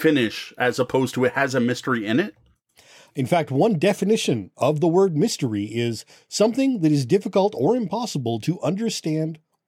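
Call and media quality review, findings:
No audible faults found in this speech recording.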